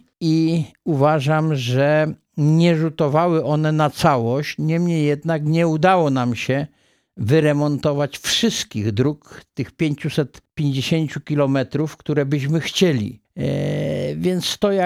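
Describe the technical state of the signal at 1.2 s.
At 1.2 s the signal is intact, with no audible fault at that moment.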